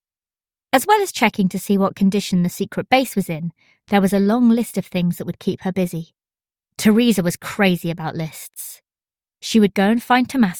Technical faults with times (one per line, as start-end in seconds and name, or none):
3.83-3.87 short concealed packet loss
3.89-3.93 short stall from a late packet